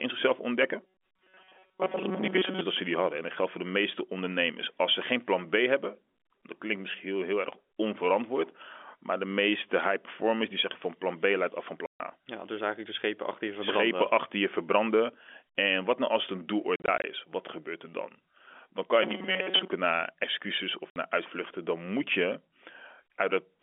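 Telephone speech, carried over G.711 A-law and heard band-limited to roughly 250 Hz to 3.5 kHz, is hit by two kinds of fault. Packet loss filled with silence occurs three times. Right after "leidt af van", 140 ms go missing from 11.86 to 12.0 s, which fits seven 20 ms packets dropping out as one hard-edged gap. From 16.76 to 17.04 s, about 120 ms are lost in scattered holes no longer than 40 ms, so the sound stutters. Just after "naar excuses of", a 60 ms hole opens at 20.90 s. Between 19.03 and 19.70 s the sound turns into a robotic, metallic buzz at about 188 Hz. This is likely repeated short buffers, where new audio arrives too slowly and roughly 5 ms chunks are replayed in place of most of the real signal, just before "naar excuses of".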